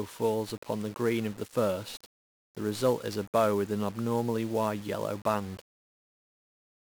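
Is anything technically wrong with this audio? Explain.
Yes. The speech carries heavy 1-bit DFPWM compression from start to finish. The codec keeps just one bit per sample. Each bit nudges an adaptive level up or down, so the waveform is only roughly tracked. The damage fits a stream of about 48 kbps. The coarse stepping leaves strong, broadband quantisation noise. The voice sounds fuzzy and crackly throughout. The treble is dulled or replaced by hiss.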